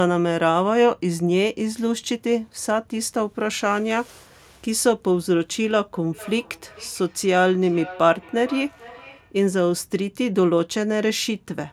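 Feedback echo between two devices, 6.12 to 9.38 s: a second device replays this speech, the microphone recaptures it, and repeats return roughly every half second, peaking about 18 dB below the voice.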